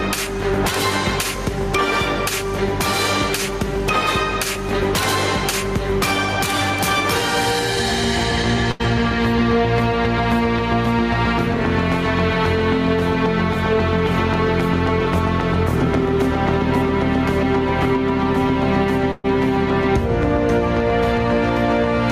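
Gain pumping runs through the whole clip, swinging around 15 dB, likely from gain set far too high and a fast limiter pulling it down. On a waveform the envelope looks flattened, with the noise floor rising and falling between peaks.

A burst of packet loss hits at 8.71 to 8.81 s and again at 19.11 to 19.26 s. The receiver stretched the last sound over each gap, for about 80 ms and then about 120 ms, fading it to a held buzz or hiss. The audio then picks up further on with that stretch missing. A spectrogram shows smeared, repeated bands that dim before a hard jump.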